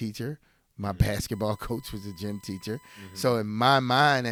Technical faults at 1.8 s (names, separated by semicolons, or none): USB whine